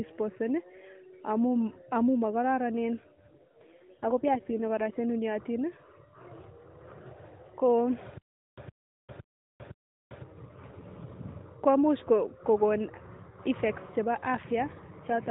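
AMR rate drops in this speech clip, from 3.17 to 4.94 s just after "amun mokororonen" and again from 14.99 s to the end, leave the band unchanged and the sound unbroken but rougher and more synthetic. This fits the network cutting AMR-NB from 12.2 to 5.9 kbps, trading speech detail for error protection.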